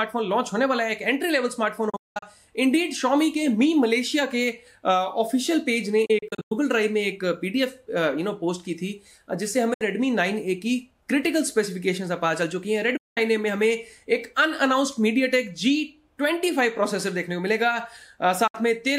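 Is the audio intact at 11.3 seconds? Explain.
Yes, the audio is intact at 11.3 seconds, with no dropout, glitch or other fault at that point.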